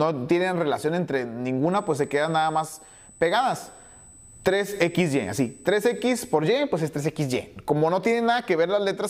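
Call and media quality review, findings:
USB whine, 1.72 to 6.35 s. Steady fixed-pitch tone at 8 kHz, about 25 dB below the programme level. Probable component: USB audio interface or its power and ground path. Mechanism: current drawn in 125-microsecond microframes leaks into the analogue supply. That repeats 8000 times a second.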